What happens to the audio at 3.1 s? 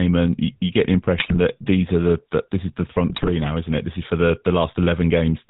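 At 3.1 s, GSM bit errors break up the speech until 3.29 s, between "that this is the" and "now isn't it". Corrupted filter, pitch and gain values reach the decoder. Each damaged frame gets a bent spectrum or a level jump. The result is squawking, popping and gargling.

Underneath, the GSM full-rate codec is active here too, as it is everywhere in the clip. Its pulse-driven vocal-tract model, which fits a 13 kbps stream, leaves the voice plainly buzzy and gravelly. Nothing above 4 kHz passes.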